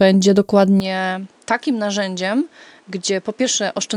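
At 0.8 s the speech abruptly turns duller and roughly 10 dB quieter, with no gap, and stays that way to the end: the input likely switched to a poorer device. A spectrogram shows energy cut off above 10.5 kHz and new noise about 35 dB down, and the waveform visibly shrinks.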